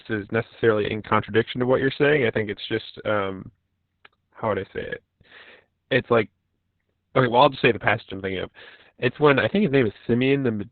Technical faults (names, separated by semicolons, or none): Opus voice compression